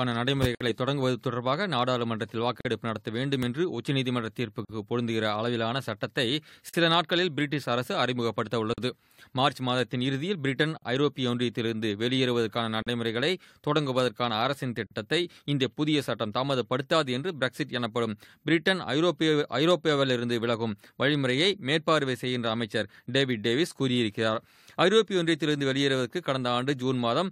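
Right at the start, at 0.55 s, the sound drops into a 57 ms hole, then repeats the trick roughly every 2 s with slightly shorter 43 ms gaps at 2.61, 4.65, 6.69, 8.74, 10.78, 12.82 and 14.87 s. That's a gap at a join of encoded pieces: each chunk carried its own encoder start-up delay and padded final frame, so silence sits at every seam. You hear a brief, slightly softened dropout before the sound picks up where it left off.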